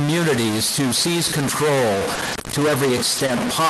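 A stuck bit runs through the whole clip: the speech carries distortion, and the pauses fill with a steady layer of noise. The likely cause is a single data bit held permanently at 0 or 1 by a faulty line or converter. Roughly half of the samples are then wrong by that bit's weight, in a pattern that follows the waveform. Near silence the bit flips with the sign of small values, which keeps the pauses noisy.

Scattered short gaps occur between 1.95 s and 3.48 s. About five packets of speech went missing, one at a time, none longer than about 20 ms and roughly 100 ms lost in total. The receiver covered each hole by extending the preceding sound, and the patching and re-alignment spread over about 240 ms of audio. Each gap is heard as a brief tick, smear or hiccup while the speech stays largely clear. The call codec's normal band limit near 12 kHz applies throughout.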